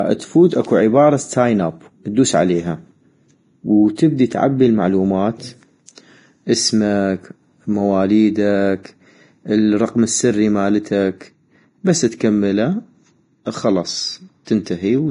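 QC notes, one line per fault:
Throughout, likely Vorbis compression: nothing gets through above 10.6 kHz, and the remaining treble is quantised so coarsely that it turns into grainy hiss, roughening the speech and smearing consonant onsets. The damage is heavy, which fits a low bitrate around 29 kbps.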